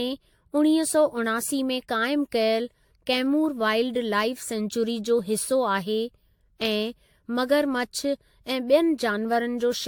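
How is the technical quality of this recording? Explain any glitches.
The speech has a swirly, hollow quality throughout from generation loss, likely from being AAC-encoded around seven times over, each pass re-quantising and smearing attacks, with nothing above 19.2 kHz.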